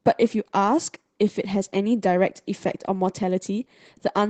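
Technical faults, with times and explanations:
Throughout: Opus voice compression. The damage is plainly audible across the whole speech clip. The sound fits Opus running near 16 kbps in its hybrid mode, with a linear-prediction coder handling the lower band and a transform layer covering the top of a full-width band. At that rate neither layer gets enough bits, so the excitation is coded coarsely, frame by frame, leaving the voice with a rough, somewhat synthetic edge.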